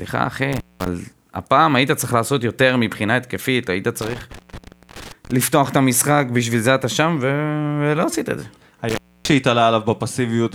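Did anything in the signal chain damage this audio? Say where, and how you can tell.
Yes, intermittent contact in the analogue wiring: a loose connection opens for 0.20, 0.59 and 0.28 s within breakups at 0.52–0.88, 4.02–5.31 and 8.89–9.32 s.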